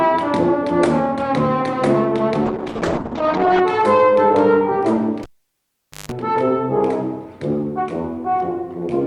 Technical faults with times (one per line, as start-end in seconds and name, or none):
2.47-3.67 call bitrate drop
5.23-6.12 cable pulled and plugged in